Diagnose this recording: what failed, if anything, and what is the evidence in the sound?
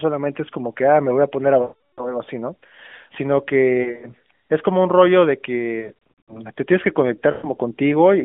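Lost AMR speech frames on the radio link at 1.62–2.18, 3.82–4.10, 5.80–6.43 and 7.32–7.47 s: the decoder repeats stale parameters with falling gain, showing smeared, fading harmonics and shrinking waveform envelopes.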